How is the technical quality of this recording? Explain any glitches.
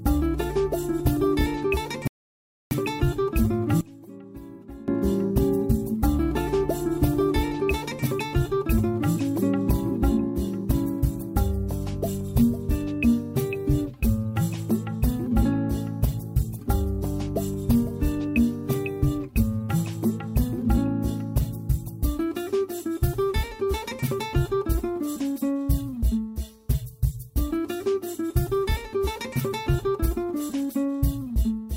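Two glitches affect the recording, both brief and both in its first five seconds.

At 2.07 s a rebuffering stall occurs: the player exhausted its downloaded audio and waited for more. The sound drops to silence until 2.71 s, then picks up exactly where it halted, so nothing is missing but about 0.64 s of dead air is inserted.

From 3.81 to 4.88 s, one channel inverted is the likely cause: with one stereo side's polarity flipped, the shared content cancels when the channels combine to mono. The audio falls by about 21 dB and becomes a faint remnant until normal level returns.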